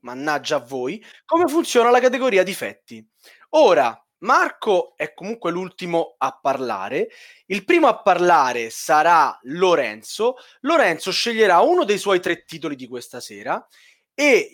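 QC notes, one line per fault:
No faults heard anywhere in the speech.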